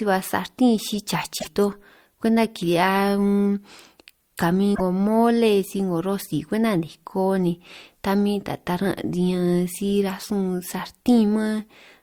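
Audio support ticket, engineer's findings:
Damaged data in a compressed stream, speech, two events. Short glitch at 1.36–1.47 s, just before "toj kwenta", and at 4.72–4.81 s, just before "mole si 'ngo rosi". Component: decoder input. Corrupted frames are misread, sync is lost, and the decoder hunts for the next header. Spectrogram: a brief disturbance. Waveform: a discontinuity.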